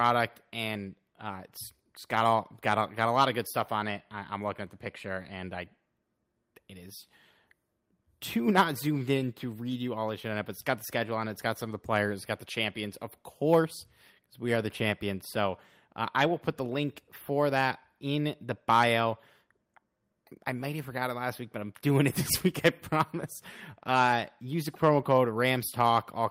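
A listen through this speech recording turns up nothing technically wrong at any point.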